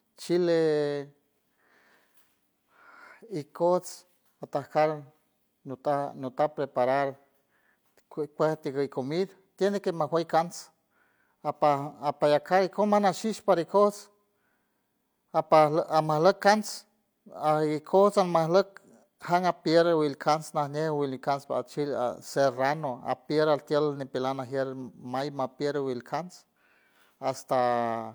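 No technical faults can be heard anywhere in the speech recording, and the signal stays steady and intact throughout.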